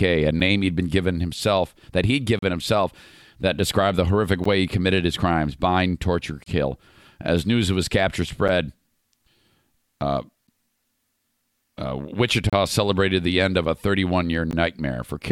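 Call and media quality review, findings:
Hard-edged dropouts to silence, short and regular: 0.40, 2.39–2.43, 4.44, 6.44–6.46, 8.48, 10.47, 12.50–12.53 and 14.51 s, one every 2 s, each roughly 7 to 35 ms long. The longest falls between "given himself that he'd" and "himself that described the". Gap between stream segments: timestamps of consecutive 2 s segments leave small holes that the player pads with silence. Nothing is dropped, so the run time stretches slightly.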